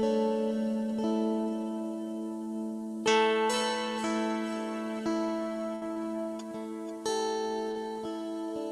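At 5.75 to 5.83 s, a burst of packet loss left about 60 ms undelivered. The receiver stretched the last sound and faded it, so a held buzz or fading hiss replaces that stretch. Short concealed packet loss follows at 5.93 s (about 20 ms) and 7.71 s (about 40 ms), where brief gaps were filled from preceding audio, leaving quick smears or wobbles.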